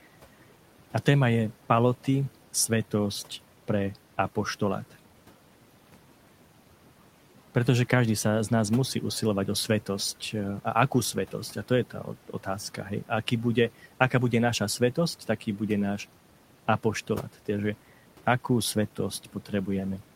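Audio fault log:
11.9–12.46 s and 19.23–19.51 s, speech cut by the noise suppressor: after "to je" and again later, the suppressor mistakes brief speech for noise and dips it by about 9 dB and 11 dB, so it sounds swallowed.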